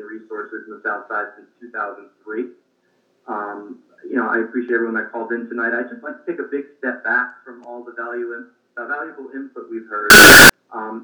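From 10.10 to 10.50 s the sound turns abruptly very loud and harsh, a near-square waveform at an almost fixed, high level, with background noise raised to the level of the main sound, though pitch still comes through. This is likely float read as integer: 32-bit float samples decoded as 32-bit integers.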